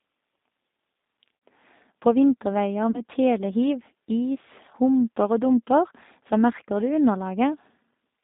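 Speech that has passed through the G.729 codec for its whole length, so it sounds slightly rough and synthetic, with the band confined to roughly 200 Hz to 3.7 kHz. The decoder rebuilds each frame from a vocal tract filter, a pitch predictor and a few pulses, which fits an 8 kbit/s G.729A stream. On a spectrogram everything above about 3.7 kHz is empty, and the harmonics look smeared and grainy. Two dropouts show VoIP packet loss concealed by the speech codec. From 1.36 to 1.42 s, about 60 ms of audio is missing, consistent with two lost packets. From 2.91 to 3.02 s, about 30 ms is gone, which fits one lost packet. In each gap the decoder extends its last pitch and filter at falling gain, so the sound turns into a brief buzzy tone or coloured noise that fades. On a spectrogram these gaps appear as a stretched, frozen sound that dims. In the waveform they show as a stretch that decays, and the voice stays weak or distorted for a short time after the real signal returns.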